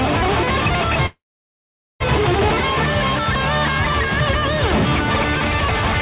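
From 1.06 to 2.02 s the sound halts, fades to silence, then resumes intact: a call audio freeze, likely from delayed packets emptying the jitter buffer.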